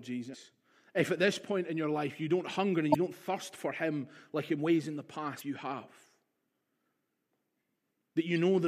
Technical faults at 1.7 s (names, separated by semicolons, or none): none